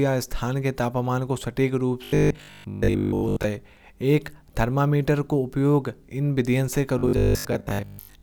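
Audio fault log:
2.04–3.44 s and 6.99–8.22 s, robotic sound from repeated short buffers: audio likely arrived too seldom, so roughly 20 ms chunks were looped over most of the real speech, forcing a rigid, metallic 50 Hz buzz.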